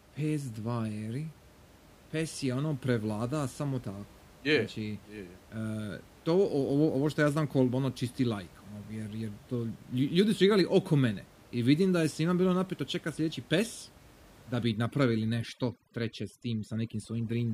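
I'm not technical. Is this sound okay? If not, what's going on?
No, not entirely. From about 14.6 seconds to the end, the speech is affected by overdone noise removal. A cleanup tool meant to strip out the background noise was set too aggressively, so it also shaves away the softer parts of the voice. In that last stretch the background drops to an unnatural near-silence with twinkling, warbling specks. The steady room noise heard underneath the speech before that point is ordinary.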